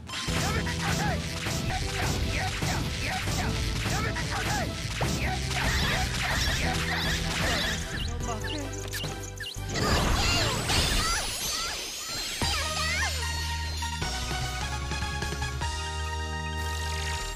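Skips at 1.7 s, 9.26 s and 15.62 s jump ahead, losing around 70, 40 and 20 ms, most likely a dropped buffer (overrun).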